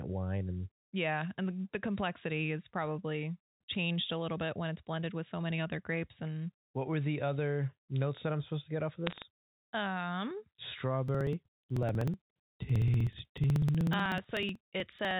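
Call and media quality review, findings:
Bit errors on a digital phone line: sharp crackle burst, 9.07–9.22 s, after "to get off of"; flipped sample bits, around half a percent. Waveform shows isolated spikes; spectrogram shows thin broadband vertical lines.

Periodic USB or driver dropouts: regular ticks every 0.062 s, 11.08–15.11 s, around seventy; roughly 2 ms skipped each time. Waveform shows step discontinuities; spectrogram shows evenly spaced vertical striations.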